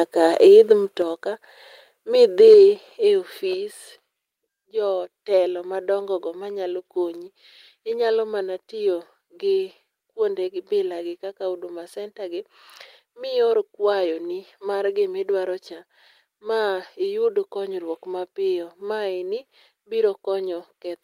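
At 1.02 s and 2.40 s the speech drops abruptly by about 4 dB and 3 dB, likely the call software stepping the microphone volume down. Unlike a fade, the level falls at once, cleanly. From 2.47 to 2.54 s, microphone overload, likely from input set too high, pushes peaks about 1 dB past the converter's limit, giving a brief crackling edge rather than a level change. Further step-downs follow at 2.54 s (about 3 dB) and 3.54 s (about 4 dB).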